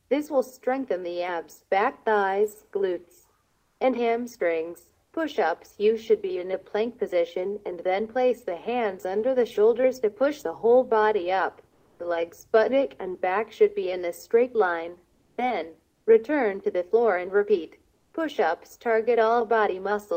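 Discontinuous transmission, likely Opus DTX, halts sending during quiet gaps. The receiver then plays comfort noise in place of the background at 3.43–3.79, 5.05–5.13, 11.69–11.99, 15.13–15.37, 15.91–16.05 and 17.95–18.13 s. The real background gives way to a flat, detail-free hiss that sits up to about 5 dB louder or quieter.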